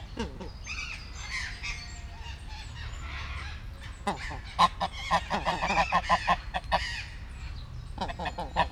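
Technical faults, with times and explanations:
Nothing stood out on listening; no technical fault could be heard anywhere in the recording.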